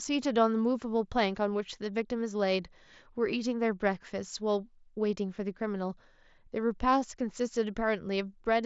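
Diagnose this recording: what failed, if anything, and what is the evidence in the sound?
Nothing has failed here; the speech simply comes over a wideband Bluetooth headset link (mSBC), so it tops out around 7.7 kHz with just a light trace of that codec's usual graininess, which is exactly how such a path is meant to sound.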